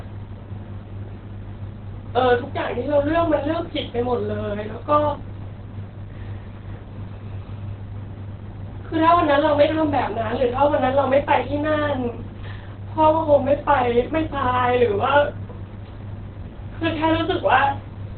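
All the way through, the speech sounds muffled and hoarse, with nothing above 4.5 kHz. That's likely heavy Opus compression, with the encoder dropped into its SILK speech mode at narrowband, which fits a very low rate of roughly 12 kbps.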